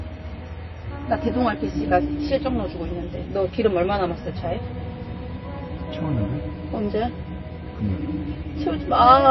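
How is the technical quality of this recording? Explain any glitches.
Quality is poor throughout, because of likely MP3 compression at a low bitrate. The encoder ran short of bits, so it cut the treble outright, leaving nothing above 5.8 kHz, and dropped weaker frequency components that flicker in and out between frames. The result is dull, muffled audio with a watery, swirling texture, metallic chirps on bright or hissy sounds, and smeared attacks. The damage is plainly audible and fits a bitrate somewhere near 23 kbps.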